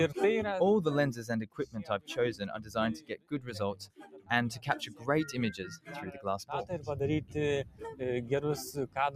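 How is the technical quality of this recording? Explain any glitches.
The technical quality is compromised by a speech-oriented noise suppressor left active on non-speech material, which causes audible level pumping.

Noise suppressor applied to music or sounds: throughout the clip, the processor treats sustained tones and ambience as noise and attenuates them, while transients pass. Level swings of around 10 dB make the sound pump and thin out between attacks.

Sound cut by the noise suppressor: at 1.47–1.76 s, 2.99–3.51 s, 3.8–4.3 s, 4.84–5.07 s, 5.74–5.91 s and 7.64–8.01 s, held or decaying material is pulled down by about 10 to 15 dB, so tails collapse abruptly instead of fading naturally.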